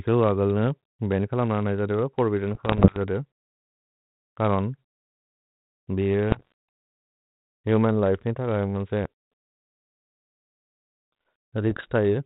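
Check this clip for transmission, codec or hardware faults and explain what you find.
One transmission fault is present: bit errors on an ADPCM link, in three bursts at 2.54–2.96 s, 6.31–6.52 s and 11.70–11.86 s, with roughly one bit in a hundred corrupted in the first two and one and a half in a hundred in the last. Each flipped bit knocks the decoder's step size and predictor off track, so the error rings on for several milliseconds and produces pops, gritty bursts and brief jumps in level. On a waveform these show as spiky, uneven excursions. On a spectrogram they appear as short broadband streaks reaching the 4 kHz ceiling of the telephone band, which fits a 32 kbit/s G.726 link.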